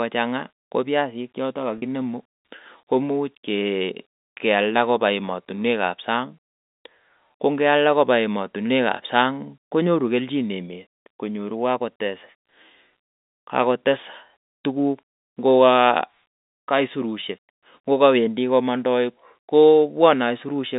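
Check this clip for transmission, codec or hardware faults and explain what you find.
One transmission fault stands out: a brief packet loss with pitch repetition, heard through a telephone-band line.

From 1.78 to 1.82 s, about 40 ms of the signal is missing. That fits two lost 20 ms packets. The receiver covers the gap by repeating the last pitch period of the speech. It fades that copy out rather than leaving silence. Because the gap is so short, the concealment sounds like a slightly held, buzzy tone before normal speech resumes. The audio runs through G.711 coding, with a band from 200 Hz to 3.7 kHz.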